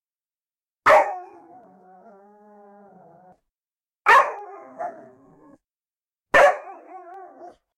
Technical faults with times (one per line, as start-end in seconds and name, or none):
0.72-7.14 clock drift buffer slips